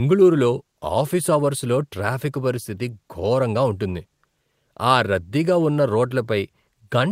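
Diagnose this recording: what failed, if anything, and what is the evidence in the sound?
Nothing failed in this recording. None of the stages from wiring through playback leaves any audible trace of a problem in the speech.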